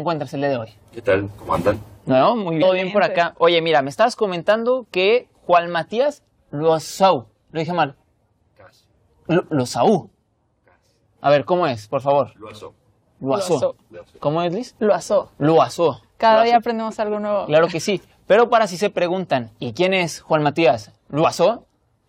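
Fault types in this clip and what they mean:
Damaged data in a compressed stream: corrupted bytes make the decoder misread frames and lose sync, producing brief glitches at 2.61 and 21.24 seconds.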